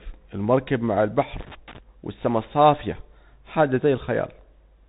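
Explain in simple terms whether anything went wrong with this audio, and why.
Yes, two things went wrong. First, the whole recording passed through a Bluetooth CVSD headset codec, the narrow phone-quality link many wireless headsets use. It throws away everything above about 3.8 kHz, so the speech sounds muffled and boxy, with scratchy s sounds and a grainy hiss underneath.

Second, there is loose connector crackle from about 1.40 to 1.78 s, right after "المركب مع البحر" and before "والسما الصافية حاجة". A worn or dirty contact kept breaking and remaking the connection, chopping the signal into a short, irregular burst of crackling and scratching.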